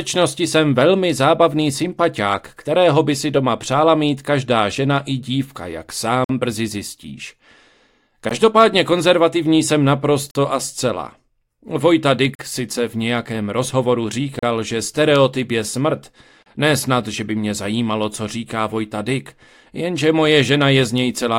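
Gaps between stream segments at 6.24–6.29, 8.29, 10.31–10.35, 12.35–12.39, 14.39–14.43 and 16.43–16.46 s: hard-edged silences of 16 to 49 ms recur every 2 s where segment timestamps fail to meet. The player fills each gap with silence, and no audio is lost.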